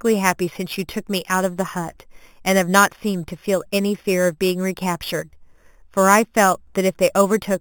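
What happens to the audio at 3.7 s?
Imaging from sample-and-hold upsampling, at 3.7 s as throughout: repeating 8 kHz samples up to 44.1 kHz mirrors the speech into 4 to 8 kHz, a metallic fizz about 14 dB down.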